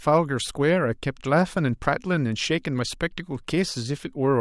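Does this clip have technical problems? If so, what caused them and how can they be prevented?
No, nothing in this speech recording points to a technical fault, so there is no cause to trace and nothing to prevent.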